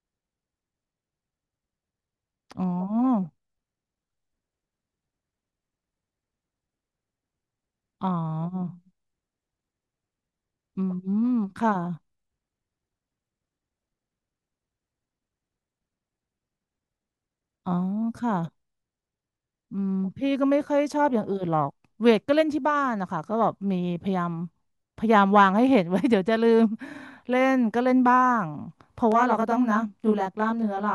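At 29.12 s, channel delay (comb filtering) sets in and lasts to the end of the clip. One channel runs late by roughly 20 ms, and the two are then summed to mono. Parts common to both channels cancel at evenly spaced frequencies, beginning very low, near 20 Hz. The notches sit close together and stay fixed. The speech sounds rough or slightly doubled.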